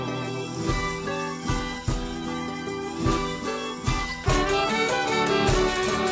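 Sound dropped by the voice detector at 4.24 s: a 20 ms slice gives way to comfort noise, likely because the sender's detector mistook it for background. Nothing above 8 kHz throughout.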